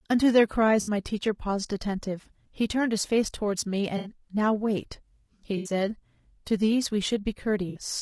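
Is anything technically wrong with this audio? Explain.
Yes. Throughout, the speech sounds rough and grainy, with noise between harmonics and a synthetic top band. This is likely low-delay AAC compression at a low rate, around 32 kbps.

AAC frame loss with concealment occurs at 0.81–0.91, 3.97–4.11, 5.57–5.71 and 7.69–7.79 s, as smeared, noisy patches of 60 to 80 ms. The decoder patched missing frames from the last good spectrum, so these gaps never drop to silence like ordinary dropouts.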